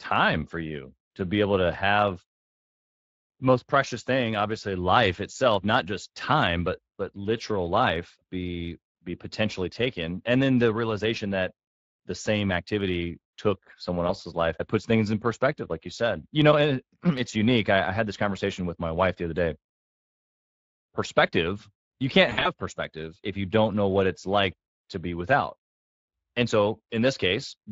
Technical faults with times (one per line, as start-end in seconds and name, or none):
0.00-27.71 Speex codec
14.07-14.13 VoIP packet loss concealed by the speech codec
22.29-22.50 VoIP packet loss concealed by the speech codec